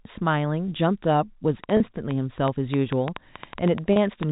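From 1.64 s to 4.24 s a train of clicks runs at about 5.8 per second, irregularly spaced, roughly fifteen pops standing about 15 dB above the speech, likely interference from nearby equipment. At 1.77 s and again at 3.93 s, packet loss with pitch repetition fills a 30 ms gap, consistent with one lost packet each time, by repeating the last pitch period, heard as a brief held, buzzy sound.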